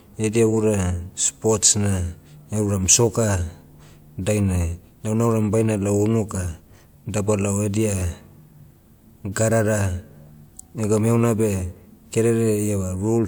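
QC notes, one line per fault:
No faults detected in this speech recording.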